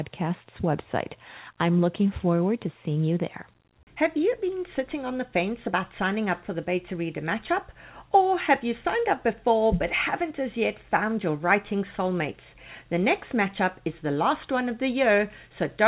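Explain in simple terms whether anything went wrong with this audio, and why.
Nothing went wrong here.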